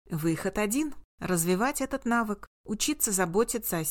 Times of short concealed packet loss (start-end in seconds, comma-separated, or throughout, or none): none